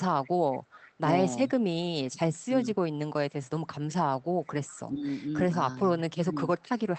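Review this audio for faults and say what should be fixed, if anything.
An echo leak appears from 0.23 to 0.93 s and again from 4.23 to 4.8 s. A faint copy of the speech returns 396 ms late, about 25 dB and then about 30 dB below the direct signal. This is likely a far-end echo canceller letting residual loudspeaker pickup through. To prevent it, retune or replace the far end's echo canceller and reduce loudspeaker-to-microphone coupling, for example with a headset.

Speech suppressed in double talk occurs at 4.9 to 5.07 s, dipping by about 10 dB over roughly 150 ms, and at 5.5 to 6.36 s, dipping by about 5 dB over roughly 200 ms in total. The likely cause is an echo canceller that cannot separate the local talker from the loudspeaker echo while both sides speak, so it attenuates both. To prevent it, use an echo canceller with better double-talk detection and gentler residual suppression.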